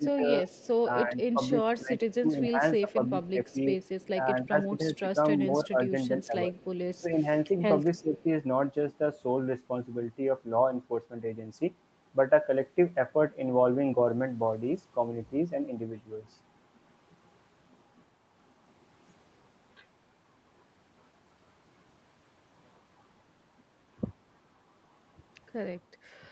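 From 0.0 to 0.46 s the speech dips by about 10 dB, likely speech suppressed in double talk: the echo canceller turns the near talker down while the far end speaks. The same dips return at 1.04 to 3.57 s, 4.15 to 7.25 s and, deeper at about 15 dB, 7.98 to 8.26 s. At 0.48 to 0.69 s comes an echo leak, likely loudspeaker pickup the canceller failed to remove. It is a faint copy about 30 dB below the speech, delayed by 311 ms. It recurs at 2.92 to 4.07 s, 6.23 to 7.0 s and 8.19 to 8.23 s, the last about 35 dB down.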